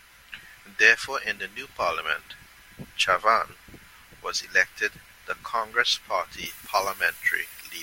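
Pre-emphasis left on from 6.46 s to the end of the speech clip at 7.82 s: the treble rises to about 11 dB above the 1 kHz level by 10 kHz, a shape matching the FM 50 µs curve. The high-frequency lift applied before transmission was never undone by the corresponding de-emphasis, so this final stretch turns abruptly thin and bright, with sibilants hissing and edgy.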